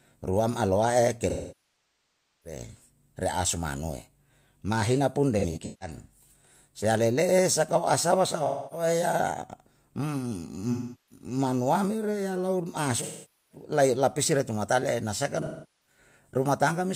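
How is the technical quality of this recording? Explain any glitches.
The recording has repeated dropouts from AAC frame loss with concealment, at 1.29–2.60 s, 5.39–5.97 s, 8.46–8.86 s, 10.72–11.25 s, 13.02–13.64 s and 15.41–15.98 s. Runs of compressed frames went missing, and the decoder covered each gap by rebuilding from the last good spectrum. The longest loss, about 1.15 s near the start, decays toward silence before the sound fades back in. The shorter losses of roughly a quarter to half a second come across as smeared, noisy patches, and the one at 5.39 s breaks into scattered fragments.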